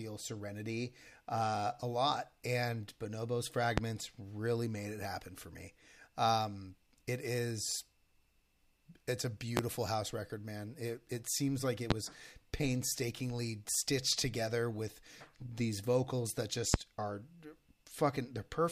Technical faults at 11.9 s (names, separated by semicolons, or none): loud pop